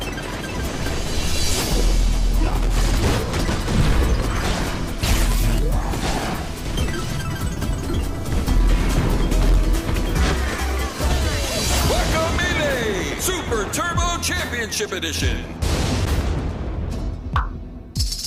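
Loose connector crackle at 2.48–2.67 s and 15.97–16.21 s: a worn contact briefly making and breaking chops the signal, producing short, irregular bursts of scratchy crackle.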